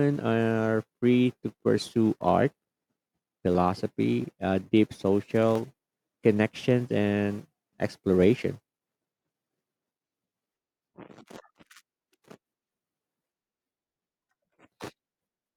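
A speech clip with clicks every 0.67 s from 0.21 to 14.9 s, likely clock drift buffer slips of about 15 samples; unlike dropouts, they recur steadily without gaps.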